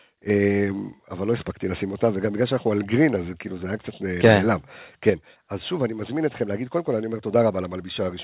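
Microphone overload, 4.24 to 4.34 s: for this tenth of a second the loudest part of the speech sounds as if it pushed past the top of the input converter, likely because the microphone's input volume was set too high. The tops of the waveform are flattened by about 4 dB, affecting a few percent of the samples in that stretch, and the squared-off peaks add a harsh, crackling edge to that syllable.

Microphone volume stepped down, 5.1 s: shortly after the clipped peak, voice and background together fall by about 5 dB in a single step, with no gradual fade. This is most likely the call software reacting to the overload by lowering the device's input volume at once. Throughout the clip the sound carries nothing above 4 kHz, which fits a narrowband G.711 telephone codec on the call path.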